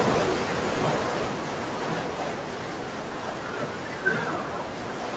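From 0.05 s to 2.76 s the speech shows automatic gain falling. The gain control judged the input too loud, or its background noise too strong, and lowered its gain gradually by about 8 dB, so the voice and its background sink together. On a waveform, the envelope tapers steadily across that stretch. A spectrogram shows all bands dimming at once, below a ceiling at 8 kHz that the call path's band limit sets for the whole clip.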